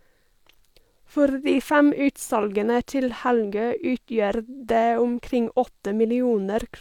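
Nothing in the speech stood out as a technical fault on listening.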